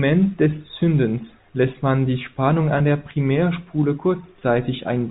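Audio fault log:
2.78–2.80 s and 4.39–4.41 s: packet loss with pitch repetition. Each 20 ms gap, which fits two 10 ms packets, is bridged by repeating the last pitch period, giving a brief held, buzzy quality on the G.711 telephone-band speech before normal audio resumes.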